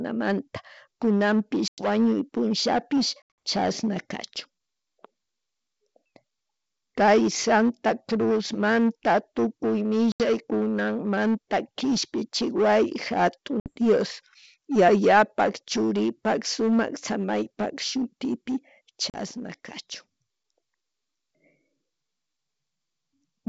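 Speech over a G.722 ADPCM call suffers packet loss at 1.68, 3.22, 10.12, 13.60 and 19.10 s, with the decoder's predictor briefly out of step, leaving hard-edged silent gaps followed by slightly distorted recovery.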